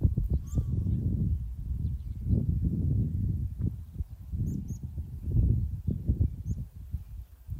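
No technical faults can be heard at any point in the clip.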